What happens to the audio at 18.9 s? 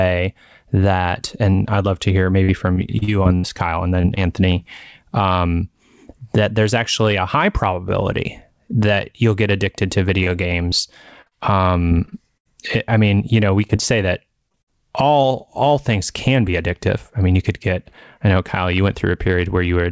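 Nothing goes wrong at 18.9 s: the speech passes through intact, carried by the WebRTC call path's G.722 coding with its band limited to 8 kHz.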